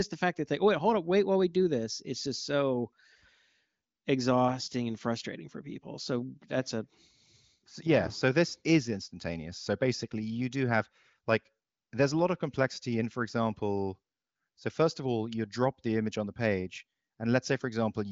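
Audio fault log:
Nothing wrong turns up in this speech clip; it sounds like it came over an AMR wideband (HD Voice) call at one of the higher rates, with the top end stopping around 7.5 kHz just as that path normally does.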